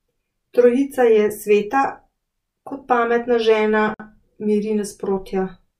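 At 3.94 s the speech drops into a sudden silence of about 54 ms, ending at 4.00 s, with smeared edges, then resumes where it stopped. This is a gap at a join of encoded pieces: separately encoded segments were spliced untrimmed, keeping encoder delay and final-frame padding.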